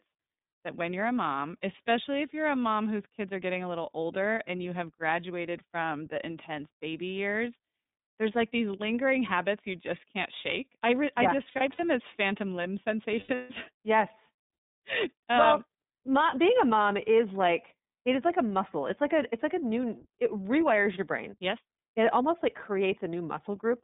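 Throughout, the speech carries the iLBC codec sound. The band is held to roughly 150 Hz to 3.7 kHz, with nothing bright above it. The voice has a plainly audible rough, slightly synthetic edge, which fits iLBC's 13.33 kbps mode with 30 ms frames. That graininess in the excitation, along with the telephone band limit, sets it apart from plain band-limiting, which would sound dull but clean.

From 11.48 to 11.80 s, between "yeah I" and "as phantom limb", lost iLBC frames break up the speech. About 150 ms is missing, scattered over 0.3 s, with the longest gap well under a tenth of a second. Each gap is filled with a held, faintly buzzy repeat of the last pitch cycle. A second burst from 13.20 to 13.51 s, just after "as phantom limb", loses 240 ms, with one stretch of about 150 ms where the buzz fades. Unlike a dropout, which would be silent, the gaps are bridged. Unlike codecs that depend on earlier frames, the voice is clean again immediately afterwards.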